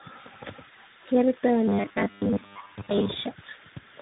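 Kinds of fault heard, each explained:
Tandem speech coding: The sound is muffled, with nothing above about 3.8 kHz, and has a rough, warbly texture throughout. This points to three speech codecs in sequence, ending in a CVSD-style coder, each re-encoding the previous codec's degraded output so the errors accumulate.
Robotic sound from repeated short buffers: From 1.68 to 3.09 s the speech turns into a rigid, metallic buzz at 100 Hz. This is likely from a 10 ms buffer being replayed in place of late audio, with most of the real signal in that span skipped.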